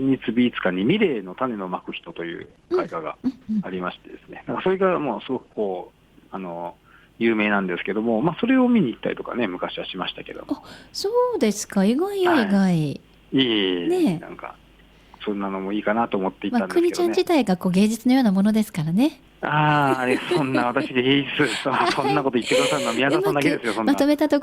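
A call bitrate drop runs from 1.8 to 5.77 s. The bandwidth estimate fell, so the encoder coded coarsely. The roughness fits a fall from about 64 to 12 kbps, and the top end narrows from 20 kHz to 12 kHz, dulling it.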